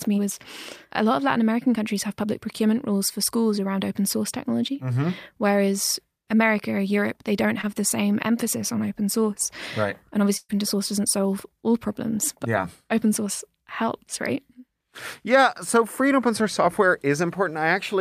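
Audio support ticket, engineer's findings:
Short concealed packet loss, 7.61 to 7.65 s: brief smear in the speech. About 20 ms never reached the decoder in time. Receiver-side concealment extended the preceding sound for 17 ms, then crossfaded back into the real audio.

Burst of packet loss, 10.37 to 10.51 s: held, fading continuation followed by a 30 ms dropout. About 120 ms lost or arrived too late. The jitter buffer and concealment stretched the last sound for 117 ms while attenuating it. Speech resumes further on, with the intervening span missing.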